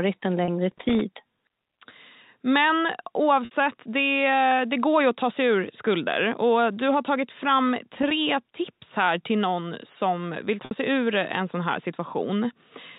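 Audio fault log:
0.45 s, 3.45–3.51 s and 10.65–10.71 s: packet loss with pitch repetition. Audio goes missing three times, for 30 ms at 0.45 s and 60 ms at each later point. This fits one lost packet, then two lost packets. The receiver fills each hole by repeating the last pitch period and fading it out. The 30 ms gap sounds like a brief, buzzy held tone. The 60 ms gaps outlast the fade, so the held tone thins away before the sound resumes.
0.63–1.01 s and 7.95–8.11 s: loose connector crackle. Two irregular bursts of scratchy crackle cut into the sound. The first lasts about 0.39 s and the second about 0.16 s. A worn or dirty contact is making and breaking in quick succession. Each break chops the signal for an instant, giving a rough, uneven texture rather than a steady noise. The crackle sits on top of the band-limited G.711 telephone sound.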